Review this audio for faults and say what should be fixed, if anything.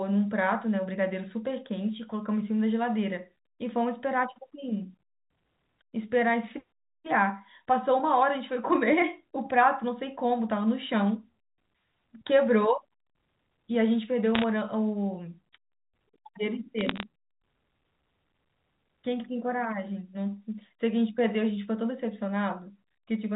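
Bit errors on the digital phone line flipped bits in individual G.711 samples at 14.35–14.44 s and 16.79–17.03 s, making sharp ticks heard as short bursts of crackle. Adding error detection on the link and concealing damaged frames would prevent this.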